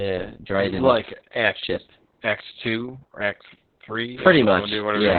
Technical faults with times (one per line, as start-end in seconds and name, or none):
0.00-5.19 Opus voice compression